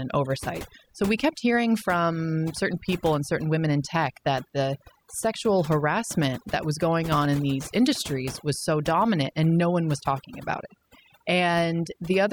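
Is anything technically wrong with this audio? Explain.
Yes, the speech has overdone noise removal throughout. The noise reduction was set so hard that any frequency band sitting close to its noise estimate gets pulled far down or cut out, and the softer parts of the voice are removed along with the noise. Gaps drop to near silence sprinkled with twinkling specks. A spectrogram would show black, empty background dotted with isolated bright specks and ragged, hollowed-out speech harmonics.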